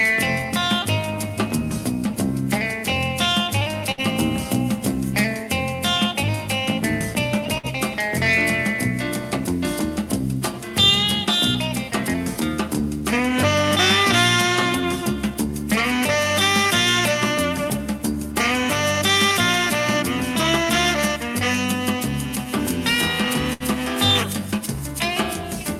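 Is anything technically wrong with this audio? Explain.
Yes, there is a burst of packet loss at three points: 3.91 to 4.01 s, 7.58 to 7.66 s, and 23.53 to 23.63 s. Each time, several consecutive packets arrived too late or never arrived. The receiver filled the hole by stretching the last sound for 55 to 68 ms and fading it down, which is heard as a brief held buzz or dying hiss. About 60 ms of audio is then skipped. Unlike a plain dropout, the gap isn't silent.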